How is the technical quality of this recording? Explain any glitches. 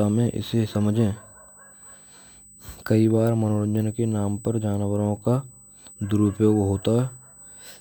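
The recording has one technical fault, a USB whine that runs through the whole clip.

USB whine: current drawn by the USB bus in its 125-microsecond microframes leaks into the audio through the power or ground path, pulsing at 8 kHz. The result is a thin, steady, high-pitched tone fixed at 8 kHz, present from start to finish and sitting roughly 25 dB below the speech. It stays audible as a constant whine behind the speech.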